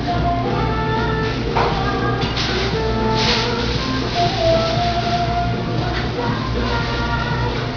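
A recording of everyday sounds with aliasing running through the whole clip. Everything stops hard at 5.5 kHz, which fits a drop to about an 11 kHz sample rate without an anti-alias filter. Content that was above that edge folds back as false, unrelated tones, roughly 15 dB below the real sound, giving a gritty, metallic edge. A cleanly low-passed recording would simply sound dull. Here the band edge is crowded with tones that don't belong.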